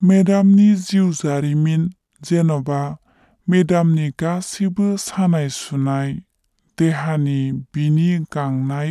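From start to finish, a wrong sample rate slows the speech to 0.73 times normal speed and lowers pitch by 5.55 semitones, which fits 44.1 kHz audio played at 32 kHz. Unlike a pitch shift or time-stretch, tempo and pitch drop together.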